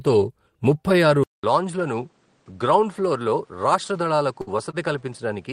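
Right after "ముప్పై ఆరు", at 1.24 s, the speech drops out for about 200 ms and comes back sounding different for the rest of the clip. It's a bit quieter, nothing gets through above 9.8 kHz, and there's a new hiss sitting well under the speech. That sudden shift in tone, level and noise, with a gap at the changeover, is most likely the input switched to a poorer device mid-recording, with another mic or headset taking over.

From 4.41 to 4.50 s there's a burst of packet loss. The receiver had nothing to play, so it stretched out the last bit of sound for about 55 ms and let it fade as it went. When the stream picked up again, roughly 60 ms of speech had been skipped. You hear a smeared, decaying tail followed by a small jump forward.

At 4.71 s there's a short stall from a late packet. The jitter buffer ran dry while it waited, which added about 25 ms of delay, so the receiver kept the last sound going for about 25 ms until the packet arrived. 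Playback then carried on from exactly where it stopped, so nothing is lost. It comes across as a brief drawn-out moment with a faint buzz or dip.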